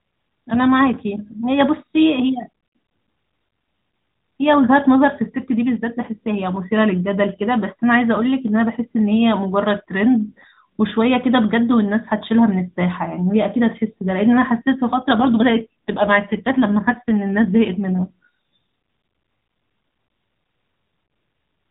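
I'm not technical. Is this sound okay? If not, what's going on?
No. AMR rate drop, 15.2 to 18.1 s: the mobile network shrank the call's data, so the voice sounds rougher and more robotic until it recovers.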